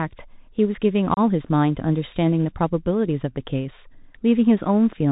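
Bluetooth CVSD headset codec throughout this speech: one-bit delta coding, consistent with a 64 kbps link, cuts everything above 4 kHz, roughens sibilants and leaves granular hiss. Unconcealed Bluetooth headset packet loss at 1.14–1.19 s: several lost packets leave a roughly 30 ms hole with abrupt edges, after which the speech returns briefly quieter.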